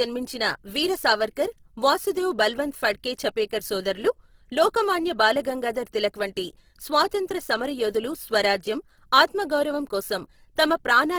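Across the whole clip the speech has a rough, grainy texture, with a noisy fizz in place of clean harmonics. That points to heavy Opus compression, likely in its music (CELT) mode at a low rate, something around 16 kbps. Starved of bits, the encoder keeps each band's energy but fills the detail with folded copies of lower bands or plain noise. So you don't hear a swirly, holey sound. The top end also stays open, reaching about 20.2 kHz.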